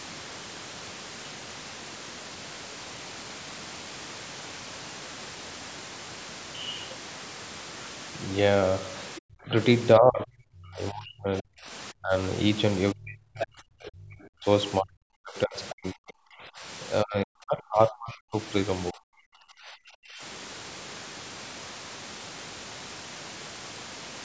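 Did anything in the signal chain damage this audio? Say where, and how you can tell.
Yes. Speech suppressed in double talk at 9.18–9.53, 9.97–11.71, 11.92–12.14, 12.93–14.46, 14.8–16.64, 17.03–18.37 and 18.91–20.22 s: the speech ducks by up to about 40 dB. This is likely the call's echo canceller turning down both talkers during overlap.

Other side's voice leaking through at 13.41–13.47 s: a brief scrap about 10 dB below the speech. This is likely loudspeaker echo that the call processing's canceller left in the microphone signal.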